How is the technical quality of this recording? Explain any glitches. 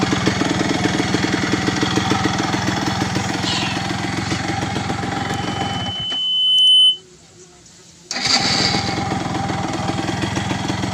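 The recording's technical quality suffers from one clear fault. From 5.16 to 7.02 s there is loudspeaker feedback squeal: the microphone's loop runs away at 3 kHz, swelling over roughly a second and a half to about 10 dB above the sound. It appears as a bright horizontal spectrogram line.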